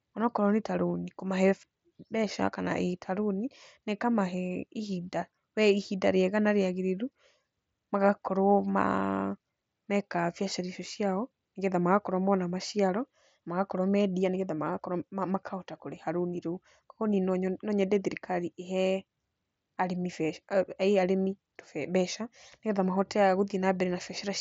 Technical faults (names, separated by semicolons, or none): none